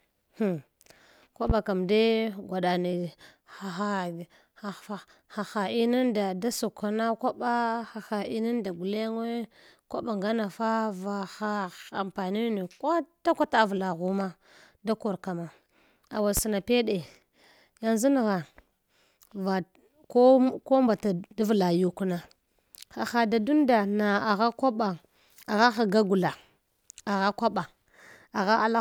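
A loud pop at 1.50–1.53 s, just before "ka dui", and another at 16.37–16.40 s, each a single thump about 15 dB and 10 dB above the speech, likely from an electrical glitch. Each shows as a sharp waveform spike and a thin full-height spectrogram stripe.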